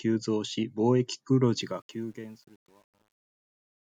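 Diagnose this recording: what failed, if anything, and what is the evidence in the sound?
From 1.6 s, just after "貿易黒", the fading speech turns gritty, and from 2.03 s to the end it is at its worst. This is truncation distortion on a fade. The fade-out, which begins around 1.6 s, was applied at a digital gain or sample-format stage without dither. The coarse stepping fits roughly 9-bit resolution.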